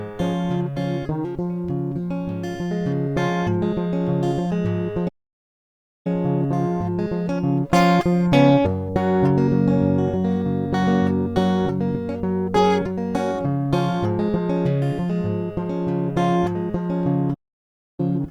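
Twice in this music clip, the player likely ran short of data or had its output thread held up, producing a playback stall each time. The music cuts out abruptly in mid-flow and the output sits silent: first from 5.08 to 6.07 s, a gap of about 0.97 s, then from 17.34 to 18.0 s, about 0.64 s. Both dropouts are long enough to be heard as clear holes in the music.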